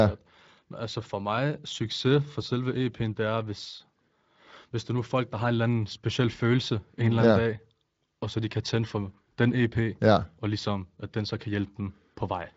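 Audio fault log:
No faults heard.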